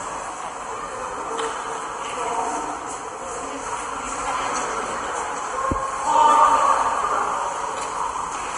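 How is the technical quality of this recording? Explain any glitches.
The recording carries plainly audible codec damage from start to finish. Throughout the clip the sound is hissy and grainy, with a dull top end: nothing is present above 10.6 kHz, tones have a roughened edge, and sharp onsets come across smeared. This is likely Vorbis compression at a low setting, which fits a bitrate of about 33 kbps. At that rate the encoder lowers the cut-off and quantises the treble beneath it so coarsely that fine detail turns into noise of similar energy, producing the grit and blurred attacks.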